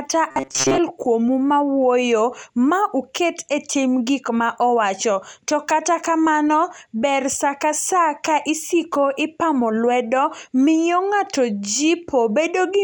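From 0.31 to 0.80 s the voice turns into a rigid, metallic buzz. This is robotic sound from repeated short buffers. The buzz sits at a fixed pitch of 134 Hz, which points to a loop about 7.5 ms long. The likely cause is audio arriving too seldom, so the software kept replaying the last short buffer. Most of that stretch is repeats, not real audio. The speech still follows its rough shape underneath.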